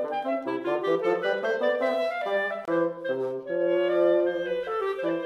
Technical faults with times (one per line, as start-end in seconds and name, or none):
2.65-2.68 gap at a join of encoded pieces